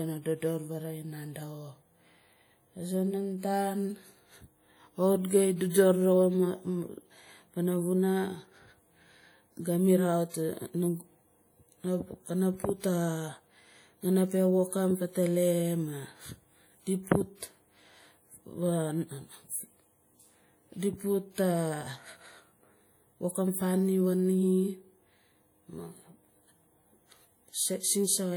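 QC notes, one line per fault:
Throughout: WMA compression. The speech carries plainly audible codec damage, a ringing, washy quality with hiss that swells and fades along with the signal. Quantisation noise is being smeared across long transform blocks, and weak spectral detail appears to have been discarded, which fits a low-bitrate encode around 48 kbps. Content still extends to about 20.1 kHz, so the harm lies in the noise and texture rather than bandwidth. The likely cause is a Windows Media Audio encode.
12.80 s and 21.34 s: pre-echo. At each point a brief hiss runs ahead of a sharp attack, lasting about 36 ms at the first and 39 ms at the second, and the onset itself sounds softened and smeared. The codec spread its quantisation noise evenly over a whole block, so noise scaled for the loud transient near the block's end also fills the quiet stretch just before it.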